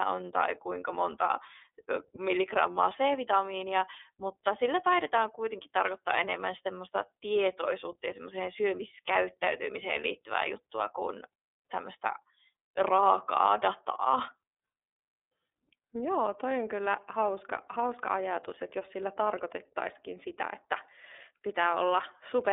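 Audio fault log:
throughout iLBC codec. The speech sounds narrow and slightly rough, with a synthetic edge. Nothing passes above about 3.7 kHz, inside a line band of 300 Hz to 3.6 kHz. Each 30 ms frame is coded alone, which fits iLBC's 13.33 kbps mode. The damage is plainly audible.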